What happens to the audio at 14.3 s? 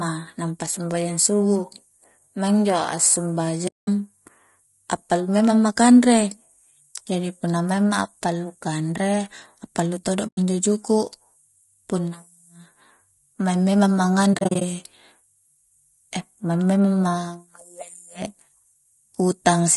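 At 14.3 s the sound breaks up with AAC frame loss with muting. From 14.33 to 14.62 s, short stretches drop out, about 160 ms of silence in total spread over 280 ms. The longest single gap is only about 40 ms. The decoder zeroes the spectrum of each missing frame. Its overlapping windows then fade the sound down and back up. So each gap is a soft-edged hole.

The surrounding audio is also affected by low-delay AAC compression. It is likely AAC-ELD at 32 kbps. It codes about 500 frequency lines a frame with a low-delay window. At this rate the damage is plainly audible. The speech sounds rough and grainy, with noise filling the gaps between harmonics. The top band sounds dulled or synthetic.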